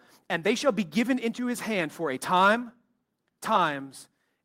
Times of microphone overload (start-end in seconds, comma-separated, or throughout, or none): 2.36-2.51